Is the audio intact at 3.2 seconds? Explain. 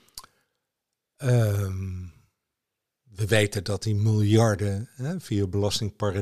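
Yes, the audio is intact at 3.2 seconds, with no dropout, click, distortion or other fault at that moment.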